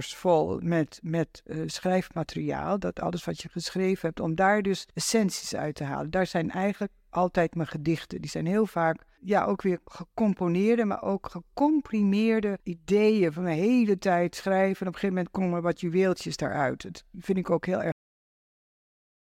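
Speech recording with a cut-off end: at 17.92 s, right after "vind ik ook heel", the audio stops mid-sound and falls straight to digital silence with no natural decay. The final buffers were evidently never written or played out, so the remaining signal is simply missing.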